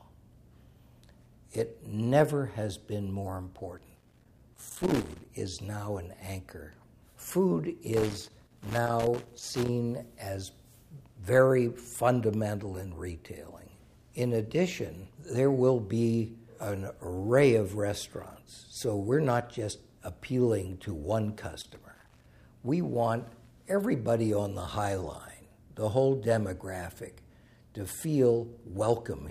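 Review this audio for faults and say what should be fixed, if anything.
Loose connector crackle appears from 3.78 to 5.25 s, 7.93 to 9.68 s and 21.61 to 22.26 s as irregular scratchy bursts where a worn contact chops the signal. Unlike steady vinyl crackle, it comes in movement-linked clusters. Clean or replace the connector and secure the cable.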